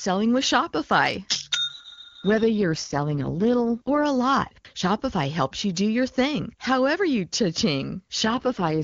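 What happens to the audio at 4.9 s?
Nothing goes wrong at 4.9 s: the speech there carries on intact, with no dropout, click or distortion.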